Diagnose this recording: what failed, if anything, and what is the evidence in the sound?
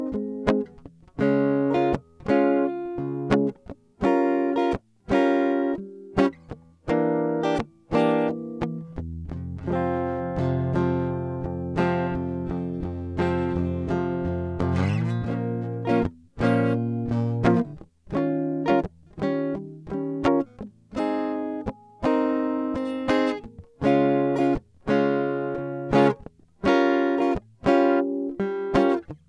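Listening through the music, nothing stood out as a technical fault at any stage of the chain.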